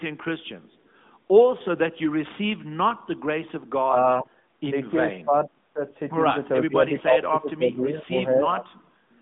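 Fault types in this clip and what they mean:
Speech suppressed in double talk: with both ends talking at once, the echo canceller likely could not tell the talker from loudspeaker echo and turned both down, so the speech sinks by up to about 25 dB at 3.85–4.34 s and 6.65–8.41 s.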